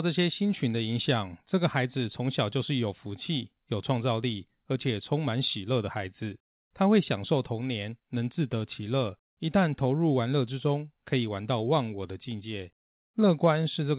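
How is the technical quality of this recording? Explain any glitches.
Nothing faulty can be heard in the speech, and the band stops at 4 kHz, which points to a narrowband call path such as G.711 mu-law at 64 kbps.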